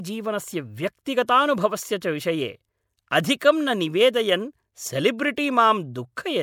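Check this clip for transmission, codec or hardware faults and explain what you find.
Five codec faults stand out, all of the same kind. Just before sharp speech onsets at 1.04 to 1.06 s, 1.27 s, 2.01 s, 3.40 s and 5.36 s, a short hiss creeps in ahead of the attack, lasting 10 to 21 ms, and each onset lands softened or smeared. This is pre-echo. The transform codec spread quantisation noise, sized for the loud attack, across its whole block, so the noise also filled the quiet moment before each onset.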